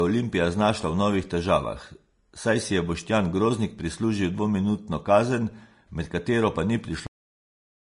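Throughout the speech, the treble is grainy and hissy, with nothing above 10.5 kHz, plainly audible damage most likely from Vorbis compression at a low rate, around 32 kbps. At 7.07 s a cut-off end occurs: the final buffers were never played, so the audio stops mid-sound with no natural decay.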